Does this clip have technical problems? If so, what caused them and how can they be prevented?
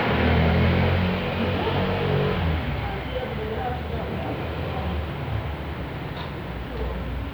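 No, the audio shows no technical faults that a listener can pick out, so nothing here needs to be prevented.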